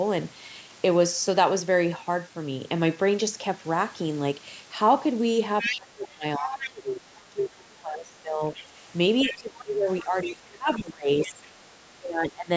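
At 5.6 to 5.81 s a second voice cuts in at close to the talker's level. This is the other side's voice leaking through, likely because the echo canceller left loudspeaker pickup in the microphone signal. It returns at 6.4 to 7.21 s, somewhat quieter, then faint at 8.55 to 8.65 s and 9.22 to 11.48 s.

From 5.62 to 8.42 s the talker's speech drops by as much as about 25 dB. This is speech suppressed in double talk, likely the canceller turning everything down when both sides overlapped. It recurs at 9.24 to 11.41 s and 11.99 to 12.5 s, with dips of about 20 dB.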